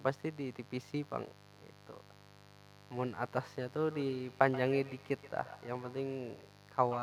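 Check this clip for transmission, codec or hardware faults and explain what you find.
Two faults are present: a mains buzz under the whole clip, and a feedback echo between two devices in the second half.

Mains buzz runs from start to finish, roughly 20 dB below the speech. Sharp switching spikes at twice the 50 Hz mains rate, from a dimmer, rectifier or unshielded path, put harmonics of 50 Hz well into the kilohertz range, heard as a constant raspy buzz.

Feedback echo between two devices starts at 3.91 s and continues to the end, peaking about 15 dB below the speech. The speech returns after roughly 150 ms as a thinner, ringing copy. Two devices in one room share the call, so one device's microphone picks up the other's loudspeaker, and neither echo canceller removes the other's playback.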